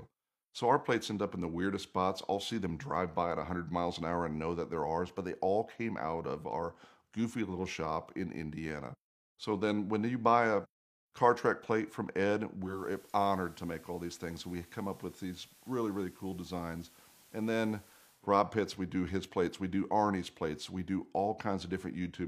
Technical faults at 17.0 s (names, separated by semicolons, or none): digital radio blending to analogue